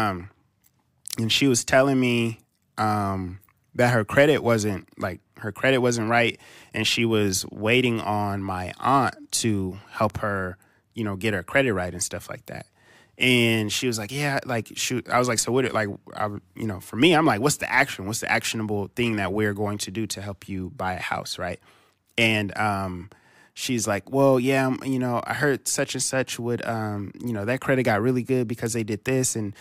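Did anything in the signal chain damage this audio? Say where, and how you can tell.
No, nothing in this speech recording stood out as damage from any stage of the signal chain on listening.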